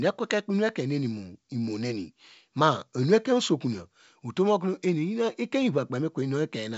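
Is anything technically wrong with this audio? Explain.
No, the speech shows only the expected band limit of G.722 wideband telephone coding at 64 kbit/s, with nothing above 7.7 kHz.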